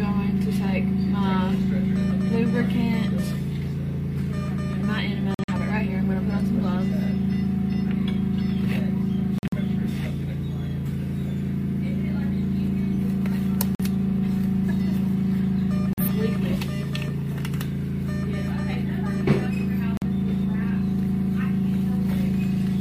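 Corrupt frames are muted at 5.34, 9.38, 13.75, 15.93 and 19.97 s: the decoder rejected damaged compressed frames and silence replaced them, giving abrupt holes of 0.09 to 0.20 s, the longer ones spanning several frames, with timing preserved throughout.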